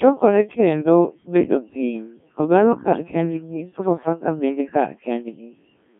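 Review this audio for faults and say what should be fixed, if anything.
The whole clip runs through a Codec 2 vocoder, and the damage is heavy. The speech is robotic and buzzy because the decoder rebuilds it from sine waves driven by pitch, voicing and a spectral envelope rather than keeping the waveform, which fits a very low rate near 1.3 kbit/s. A spectrogram shows a band from about 150 Hz to 3.5 kHz with nothing above 3.6 kHz, and the waveform looks unlike the original. Record or relay over a higher-rate codec instead.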